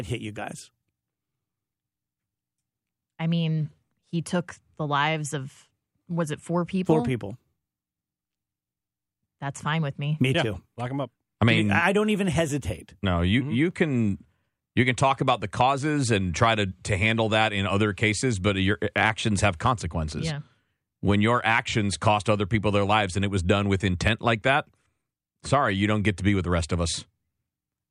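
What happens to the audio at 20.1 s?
Nothing goes wrong at 20.1 s; the speech carries on intact through that moment.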